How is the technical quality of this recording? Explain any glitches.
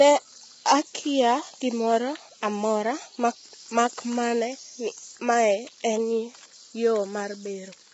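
The technical quality is poor, with heavy coding damage audible across the whole recording.

Throughout, the speech sounds rough and grainy, with a hiss-like fill between the harmonics and no content above about 7.7 kHz. This is likely low-delay AAC compression of the AAC-ELD kind used for video calls, at a very low rate, in the region of 16 kbps. Its short frames separate pitch harmonics poorly, so the starved encoder smears noise into the gaps and cuts off the top band.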